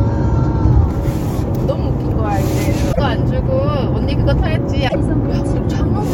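Damaged data in the compressed stream throws the decoder out of sync at 2.89 to 3.00 s and 4.85 to 4.96 s, leaving short glitches in the sound.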